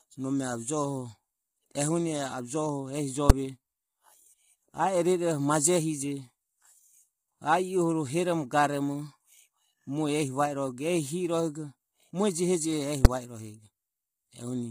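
Throughout, the speech has been squeezed through what is likely low-delay AAC compression of the AAC-ELD kind. Its short analysis frames cannot separate the voice's harmonics cleanly, and at the bitrate the damage suggests, somewhere near 24 kbps, the coder fills the gaps between harmonics with noise. The result is heavy, rough and grainy speech, with a top band that sounds thin or synthetic rather than naturally airy.

At 3.30 s and again at 13.05 s, a calculation produced invalid numbers at full scale. Infinite or undefined values became the largest positive or negative value, so the output sat pinned at one extreme for a block of about 5.8 ms, which fits a 256-sample block. Because each block is so short, the loud pops at its start and end merge into a single sharp bang that stands far above the speech around it.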